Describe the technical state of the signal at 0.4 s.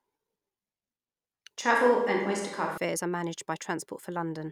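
At 0.4 s the signal is intact, with no audible technical fault at that moment.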